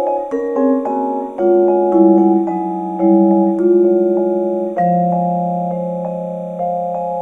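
Linear timecode from a neighbouring track or cable has leaked into the audio path, producing timecode bleed that runs through the entire clip. The code is a square wave flipping between two frequencies, near 1 and 2 kHz, so it comes through as a faint, steady chirping warble sitting behind the sound, very roughly 45 dB below it. The rhythm of the chirps fits a 29.97 frames per second code.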